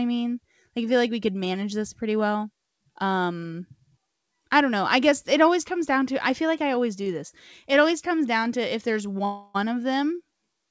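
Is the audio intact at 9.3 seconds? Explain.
No. Delayed packets likely emptied the jitter buffer, causing a call audio freeze from 9.25 to 9.56 s after "down to if there's". The last sound stretches into a fading buzz, then resumes with nothing lost.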